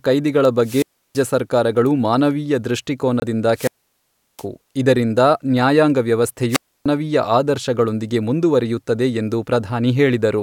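At 0.60 s the speech hits a wireless microphone squelch dropout, lasting to 1.25 s. The radio signal from the microphone weakens. Hiss rises briefly. Then the receiver's squelch cuts the output, leaving about 328 ms of near silence. The speech comes back.

At 3.20 s there is a short hole in the sound, about 21 ms long. When the speech resumes, it has moved on, as if it had kept playing. This is likely a Bluetooth dropout. Audio packets reached the headphones too late and were thrown away. The gap fits a single lost frame.

From 3.53 s to 4.46 s comes the longest squelch dropout. Static swells, then the output mutes for about 715 ms. The speech returns.

At 6.49 s the same squelch fault recurs, ending at 6.86 s. Hiss rises, the sound mutes for about 296 ms, and the speech comes back.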